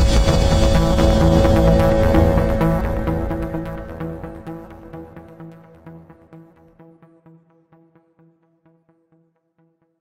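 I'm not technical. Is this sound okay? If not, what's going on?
Yes, nothing in this recording points to a technical problem with how the sound was captured, transmitted or played back.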